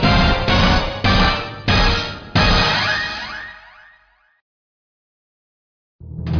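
No technical faults are audible.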